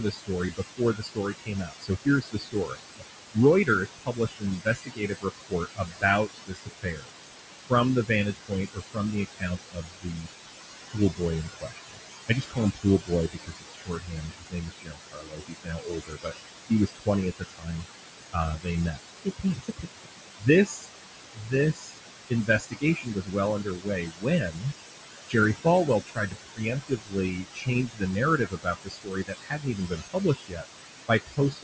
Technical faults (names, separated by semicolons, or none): noise suppressor artifacts; speech cut by the noise suppressor